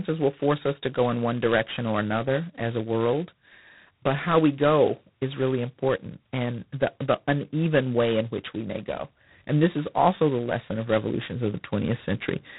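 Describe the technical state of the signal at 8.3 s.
At 8.3 s the speech carries G.726 ADPCM damage, present across the whole clip. The codec sends only a few bits per sample, coding each as a difference from an adaptive prediction. With so few steps the quantisation error is large. It rides on the speech as a harsh, rasping hiss that rises and falls with its level. The damage is heavy, which fits 16 kbit/s, the coarsest mode. Nothing above 3.9 kHz survives.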